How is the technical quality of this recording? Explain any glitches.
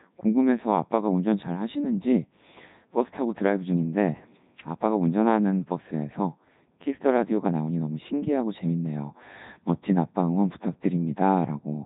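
The quality is poor. From start to finish the speech sounds robotic and buzzy, with nothing above 3.8 kHz. That is the Codec 2 vocoder at heavy damage, consistent with its 3.2 kbit/s mode: only pitch, voicing, energy and a spectral envelope survive, and sine-wave resynthesis replaces the original waveform.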